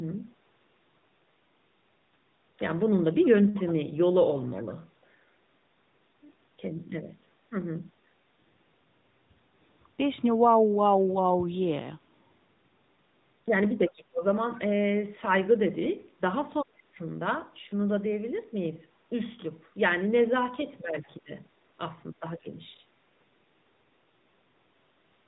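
From start to finish the speech runs through the AMR narrowband mobile codec. Everything is squeezed into an 8 kHz sampled signal, so nothing above 4 kHz survives, and the sound is muffled and boxy. The codec rebuilds the voice from a vocal-tract model fed by sparse pulses, and the damage is plainly audible: a buzzy, synthetic edge on voiced sounds, which fits the 10.2 kbps mode. The call microphone processing also trims the lowest bass.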